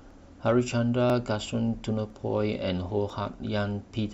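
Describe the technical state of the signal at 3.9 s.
At 3.9 s the speech signal is intact, with no dropout, distortion, clipping or other fault audible at that point.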